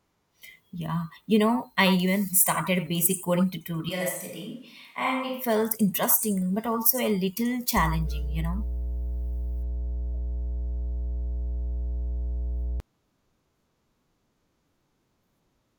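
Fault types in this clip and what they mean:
Switch to a distant microphone: after "started basic coding tutorial", at 3.89 s, the speech suddenly turns roomy and hollow, thinner in the bass, about 5 dB quieter, with more room noise. The close mic likely dropped out. It snaps back at 5.44 s, before "felt interesting but also".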